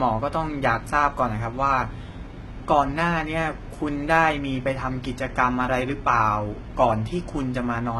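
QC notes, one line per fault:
Throughout, HE-AAC compression: heavy damage, with the treble above the coded band rebuilt from copied lower bands, so sibilants sound gritty and metallic, and nothing above 11.8 kHz. Unlike a plain low-pass, the top stays bright but synthetic. Likely a very low bitrate, around 16 kbps.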